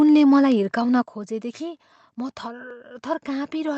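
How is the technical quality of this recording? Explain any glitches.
Two glitches stand out in this speech recording, heard over a call path whose top end stops at about 8 kHz, consistent with Opus at a modest bitrate.

At 1.02 s the level falls abruptly by about 8 dB, which is a microphone volume step-down. The call software likely judged the input too hot and cut the device's input volume in one move. A compressor or fade would act gradually and recover, but this drops the voice and the background noise together, instantly, and stays at the lower level.

At 2.71 s there is a jump in the sound, a dropped buffer (overrun). The program likely failed to read its samples before the hardware overwrote them, so roughly 10 ms went missing and the surrounding audio was spliced directly together. A network dropout or gap leaves silence or a concealment smear. Here nothing is silent. The audio simply skips ahead.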